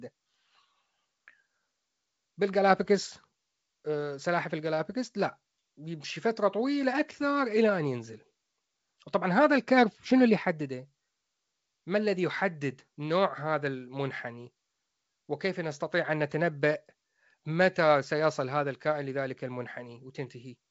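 No technical faults can be heard anywhere in this recording.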